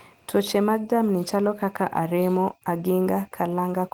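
Speech, with no audible technical faults anywhere.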